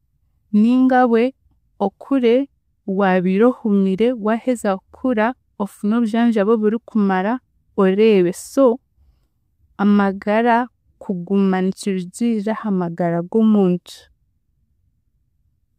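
Speech, carrying faint regular clock slip clicks from 0.13 s to 15.28 s: about twenty ticks, roughly every 0.7 s, each a single dropped or repeated sample. They likely come from two unsynchronised device clocks drifting apart by around 30 ppm.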